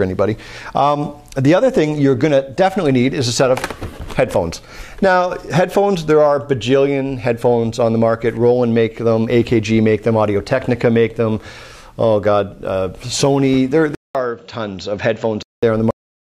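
At 13.95 s the audio goes silent for about 200 ms, then returns band-limited with nothing above 7.6 kHz, a faint new noise floor roughly 45 dB down, and similar level. This is likely an input switched to a poorer device, lasting until 15.63 s.

At 15.91 s there is a cut-off end. The audio stops abruptly in the middle of a sound and drops straight to digital silence with no decay, because the final buffers were never written out to the recording.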